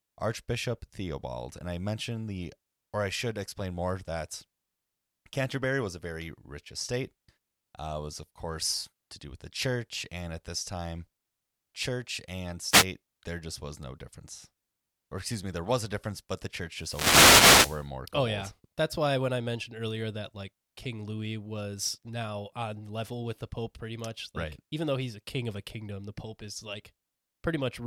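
An analogue FM radio microphone loses signal as reflected paths cancel, so receiver noise surges through: a wireless microphone noise hit. In this speech, a brief static swish spans 12.70 to 12.86 s between "church and" and "there just was no", and a longer burst runs 16.77 to 17.89 s after "difference but the church".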